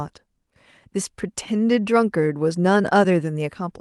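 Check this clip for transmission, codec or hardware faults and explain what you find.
Nothing in the speech sounds faulty or damaged.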